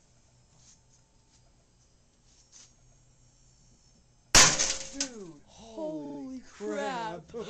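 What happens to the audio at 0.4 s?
Nothing goes wrong at 0.4 s; the audio plays through that moment intact, with no dropout, click or distortion.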